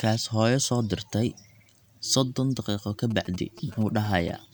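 A speech recording carries GSM signalling bursts from about 3.1 s to 4.3 s: a galloping dit-dit-dit of short buzzes repeating at about 217 Hz, roughly 20 dB below the speech. A nearby 2G phone exchanging brief radio bursts with the network induces them, and the audio circuitry rectifies them. Unlike steady mains hum or the continuous buzz of an active call, the sound arrives in irregular clustered groups rather than a constant tone.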